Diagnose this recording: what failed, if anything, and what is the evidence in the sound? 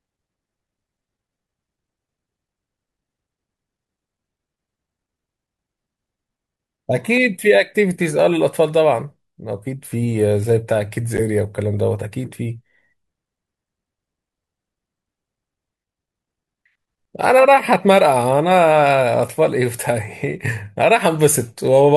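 The speech drops out between 11.17 and 11.20 s, with about 10 ms of silence before the audio resumes. This is likely a Bluetooth stall at the playback link: packets were held back by interference, the headphone buffer emptied, and output paused until retransmitted data arrived.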